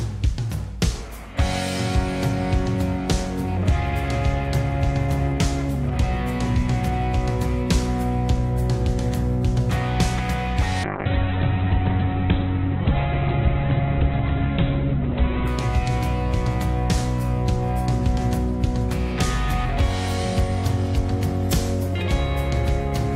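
From 10.84 to 15.55 s there's a call bitrate drop: highs vanish above 4 kHz and the sound turns rough and watery, consistent with the encoder being squeezed to very few kbps.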